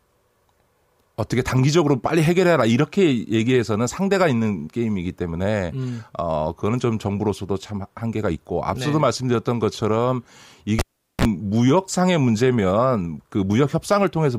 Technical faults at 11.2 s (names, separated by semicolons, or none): cable pulled and plugged in